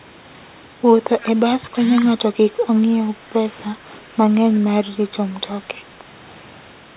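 Echo leak, 1.21 to 1.26 s: a faint delayed copy of the speech, about 20 dB down and trailing by 339 ms, likely escaped a far-end loudspeaker's echo canceller. Background gated by the echo canceller, 3.72 to 3.91 s: the room sound dips by up to about 7 dB for about a fifth of a second as the canceller clamps the microphone. Throughout, nothing above 4 kHz is heard, which fits a G.711 mu-law call path at 64 kbps.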